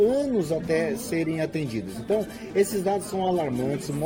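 Nothing in this audio registers as a technical fault.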